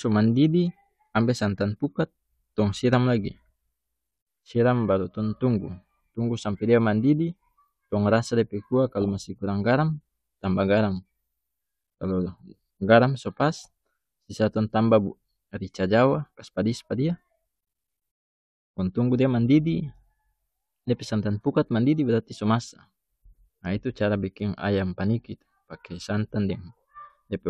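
A speech recording carries a brief burst of burbling from 9.02 to 9.09 s: DAB burbling, where residual bit errors from weak reception corrupted MP2 audio data in 10 frames.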